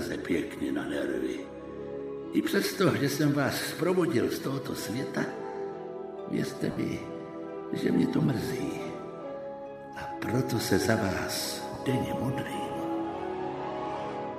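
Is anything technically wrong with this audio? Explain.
Yes. There are lost LE Audio frames at 6.71 to 6.77 s and again at 11.75 s. The LC3 decoder fills each gap by reusing the last spectrum with random signs, so the sound briefly turns into a noisy smear. The first gap lasts about 60 ms, which fits six lost 10 ms frames, and fades as concealment continues. The second gap is a single short blip.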